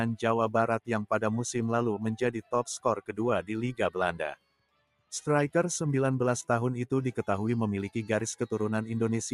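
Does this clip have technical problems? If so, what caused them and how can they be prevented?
Yes. A noise suppressor applied to music or sounds stays active throughout, pumping the level by about 5 dB. The waveform envelope flutters, and sustained spectrogram bands fade between attacks. Disable speech noise suppression for non-speech material.

From 4.36 to 5.11 s, the suppressor cuts the sound by up to about 18 dB for most of that stretch. The waveform visibly caves in, and the spectrogram goes darker. Bypass the suppressor or use a music mode for this content.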